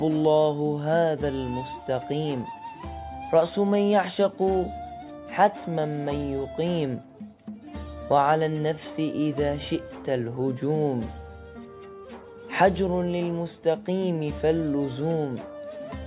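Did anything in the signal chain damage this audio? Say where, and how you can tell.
No, nothing along the chain seems to have harmed this one; there's no sign of trouble anywhere in it that would point to a particular stage.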